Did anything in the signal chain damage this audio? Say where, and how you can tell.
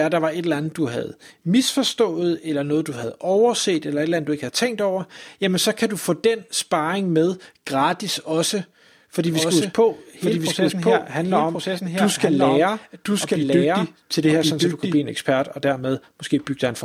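Yes: a doubled audio track from 9.27 to 14.97 s, just before "en ekspert og", with a full-band copy at about equal level, roughly a second late. It starts and stops abruptly with no decay, unlike room echo, which points likely to an editing or second-capture-path stage.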